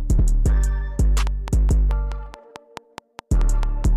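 From 1.27 s to 3.85 s a train of clicks ticks evenly over the sound, about 4.7 per second and roughly fifteen in all, peaking about 10 dB above it. This is likely interference or a faulty connection or power supply, and it shows as evenly spaced waveform spikes and thin vertical spectrogram lines.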